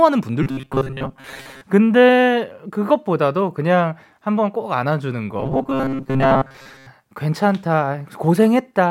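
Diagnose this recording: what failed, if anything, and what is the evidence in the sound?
The buffer stage was likely starved and looped short chunks, giving robotic sound from repeated short buffers at 0.43–1.61 s and 5.40–6.87 s: a rigid 134 Hz metallic buzz.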